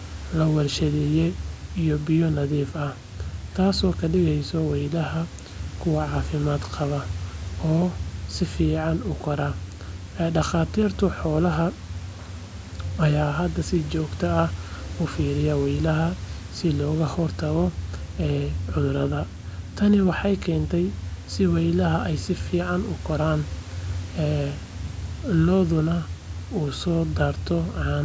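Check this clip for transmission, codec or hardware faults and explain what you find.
Nothing stood out on listening; the speech carries the ordinary character of call microphone processing, with the lowest bass trimmed and nothing above 8 kHz, which is how that path normally sounds.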